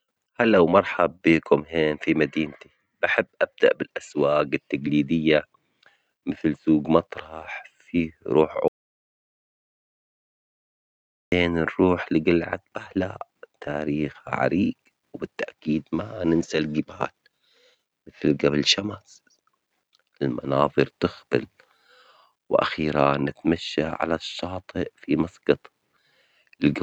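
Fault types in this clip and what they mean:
Audio dropout to silence: the speech cuts off abruptly at 8.68 s and returns mid-flow at 11.32 s, leaving about 2.64 s of complete silence where the material is simply missing. The likely cause is a lost input, such as a disconnected device or failed link, while recording continued writing silence. Unlike a natural pause or a noise gate closing, no room tone or breath remains in the gap, and the edges are hard rather than faded.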